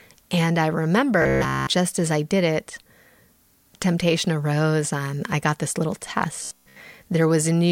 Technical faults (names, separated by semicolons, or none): robotic sound from repeated short buffers